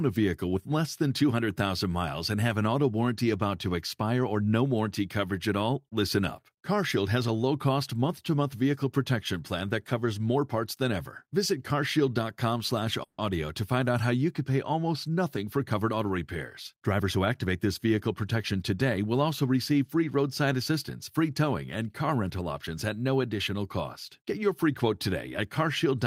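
At 13.03 s the speech halts for about 150 ms, to 13.20 s, and the gap is filled with a fading buzz or hiss carried over from the last sound rather than silence. This is a call audio freeze, most likely from packets held up in transit that left the jitter buffer empty. When audio resumes it picks up where it stopped, so nothing is lost, but the stream now runs about 150 ms later than before.

Shortly after, two stretches of jitter buffer speed-up follow, from 15.36 to 16.10 s at about 109% speed and from 16.74 to 17.55 s at about 108%. Each trims roughly 70 ms by cutting out short pitch-period-length pieces in quick succession, draining the delay built up earlier. Pitch stays the same, but the speech in these spans sounds noticeably hurried.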